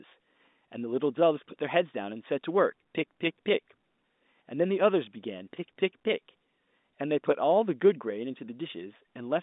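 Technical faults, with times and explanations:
No technical faults are audible in this speech. The G.711 telephone coding is working normally, with the sound confined to the line band of about 200 Hz to 3.7 kHz.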